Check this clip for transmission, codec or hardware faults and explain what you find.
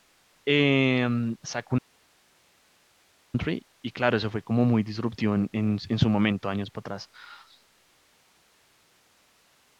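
One fault is present: an audio dropout to a faint residue from 1.79 to 3.34 s. The speech cuts abruptly for about 1.55 s, leaving only hiss roughly 40 dB down, likely a signal loss upstream while the downstream path stayed live.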